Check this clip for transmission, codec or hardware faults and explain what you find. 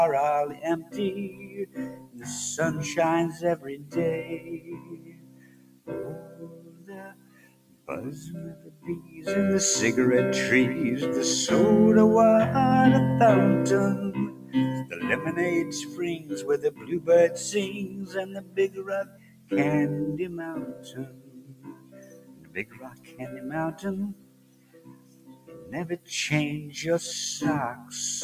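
A noise suppressor built for speech was left running on material it was never meant to handle, and it is the fault in this clip.

Noise suppressor applied to music or sounds, throughout: the suppressor judges anything steady, such as held tones, ambience or reverberant decay, to be background noise and pulls it down. Its gain swings by around 20 dB as it changes its mind, so onsets punch through while sustained parts sink, giving a pumping, fluttering, thinned-out character across the whole clip.

Sound cut by the noise suppressor, at 0.54–2.26 s, 3.58–7.88 s, 8.55–9.22 s, 14.28–14.97 s, 15.64–17.08 s, 17.87–19.51 s, 20.76–23.20 s and 24.14–26.09 s: in each stretch the suppressor clamps down harder, by about 11 dB at its deepest. Lingering and fading sound is hit most, so levels dip audibly and tails are chopped short. The longest stretch, from 3.58 to 7.88 s, has a few seconds of this dulling in total.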